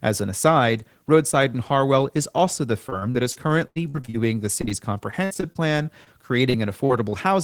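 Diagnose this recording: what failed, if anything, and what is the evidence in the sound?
Network stage: repeated packet loss (robotic sound) at 2.89–4.16 s, 5.11–6.08 s and 6.50–7.14 s. Gaps up to 83 ms are filled by extending prior audio, making speech choppy with pieces missing.

Network stage: short concealed packet loss at 4.62, 4.65 and 4.69 s, each losing 20 ms. The decoder extrapolates the preceding sound, leaving brief smears.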